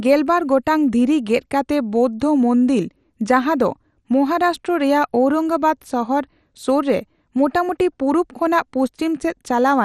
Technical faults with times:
0.00-9.85 MP2 compression

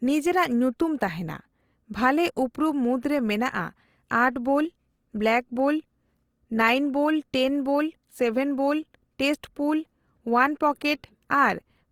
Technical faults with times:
0.00-11.91 Opus compression

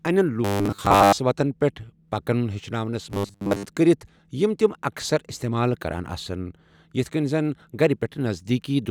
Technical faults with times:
0.45-1.19 robotic sound from repeated short buffers
3.10-3.65 robotic sound from repeated short buffers

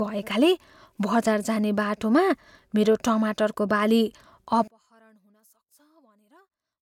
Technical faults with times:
4.68-6.81 one channel inverted

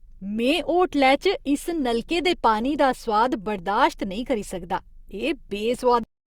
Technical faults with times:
6.03-6.37 cut-off end

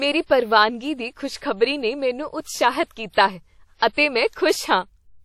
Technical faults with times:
0.00-5.24 WMA compression
3.77-3.97 pre-echo

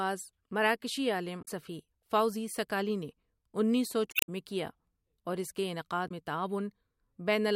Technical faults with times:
1.41-1.48 damaged data in a compressed stream
4.08-4.29 damaged data in a compressed stream
6.05-6.12 damaged data in a compressed stream

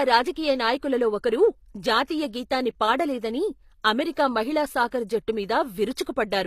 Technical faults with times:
0.00-6.46 HE-AAC compression
5.95 pre-echo

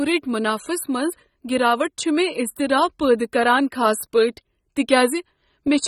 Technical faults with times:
0.00-5.88 AAC compression

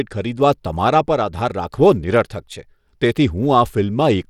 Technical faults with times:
0.00-4.30 Bluetooth SBC compression

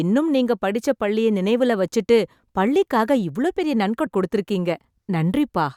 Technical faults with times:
4.06 compressed frames skipped

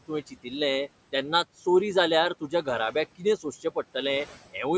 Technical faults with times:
0.00-4.77 noise suppressor artifacts
0.08-0.52 speech cut by the noise suppressor
2.41-2.67 speech cut by the noise suppressor
3.18-3.45 speech cut by the noise suppressor

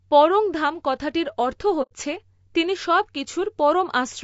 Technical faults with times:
0.00-4.24 low-delay AAC compression
1.82-1.93 AAC frame loss with muting

